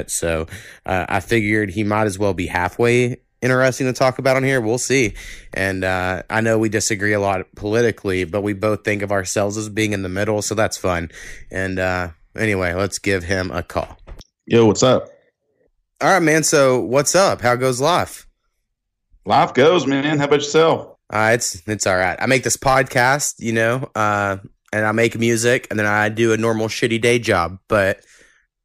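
Hard clipping runs through the whole speech clip: the signal was driven about 6 dB past what a stage could pass, so the peaks are cut flat. Only a small fraction of samples, under half a percent, hit the limit, giving brief crackle on louder syllables.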